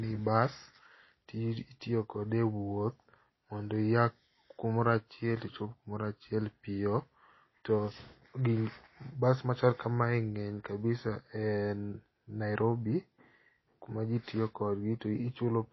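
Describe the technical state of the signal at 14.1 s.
At 14.1 s the speech carries the same damage heard across the whole clip: nothing above 5.8 kHz, plus a watery, swirling smear on sibilants. That points to likely MP3 compression at a low bitrate around 24 kbps, which cuts the treble and zeroes weak frequency lines frame by frame. The flickering warble is what separates it from a simple low-pass filter.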